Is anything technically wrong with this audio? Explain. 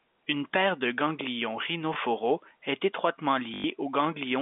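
Yes, there is packet loss with the last packet repeated, at 1.94 to 1.96 s after "paire de ganglions" and at 3.54 to 3.64 s after "est étroitement". The missing audio, 20 ms and then 100 ms, was filled by replaying the preceding chunk. The loops don't match the pitch cycle, so the first gap gives a small blip and the second a brief buzzy, robotic stutter near 50 Hz, which fits 20 ms packets. A plain dropout would leave silence rather than this repetition. The narrow telephone band, about 150 Hz to 3.6 kHz, comes from G.711 coding.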